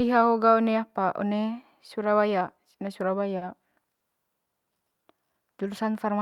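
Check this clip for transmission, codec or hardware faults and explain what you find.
Two short stalls from late packets and one jitter buffer slow-down can be heard in this speech, all in the second half.

At 3.37–3.44 s and again at 3.95–4.03 s, a packet arrived late and the jitter buffer ran dry. The receiver kept extending the last sound until the packet turned up, adding about 40 ms and 50 ms, then resumed where it left off with nothing lost. Each stall sounds like a briefly held sound with a faint buzz or dip. On a spectrogram the harmonics run flat and unchanged for that stretch, and the waveform shows the same cycle repeated.

From 4.65 to 5.34 s the receiver rebuilt its reserve by repeating single pitch periods and pause fragments many times over. This jitter buffer slow-down adds about 61 ms, so this span plays at 92% speed with the pitch unchanged, and the sounds are slightly drawn out. 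A spectrogram shows harmonics at their normal spacing but stretched in time, and the waveform shows runs of near-identical cycles.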